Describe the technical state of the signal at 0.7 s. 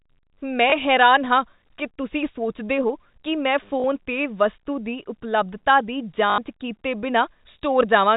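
Packet loss with last packet repeated occurs from 0.70 to 0.72 s, just before "ਹੈਰਾਨ ਹਾਂ ਕੀ ਤੁਸੀਂ". About 20 ms of speech is missing, which fits a single lost 20 ms packet. The receiver filled the gap by replaying the previous packet. That repeat sounds like a small blip, heard through the narrow 4 kHz telephone band.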